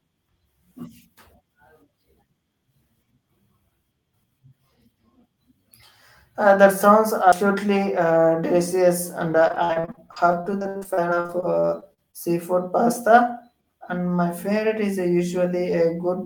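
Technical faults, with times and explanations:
7.32 s, CD skip: after "that sounds" a tick and a very brief mute of a few milliseconds, then playback resumes from another point on the spiral.
9.48 to 12.15 s, repeated packet loss (robotic sound): after "uh delicious and", 30 gaps, the longest 67 ms, about 27% of the stretch patched by extending prior sound, giving choppy audio with pieces missing.
14.47 to 15.47 s, jitter buffer speed-up: roughly 70 ms of pitch periods cut to drain the buffer, so the audio runs at 107% speed and sounds hurried at unchanged pitch.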